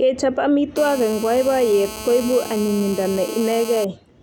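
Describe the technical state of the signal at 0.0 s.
At 0.0 s the signal is intact, with no audible fault at that moment.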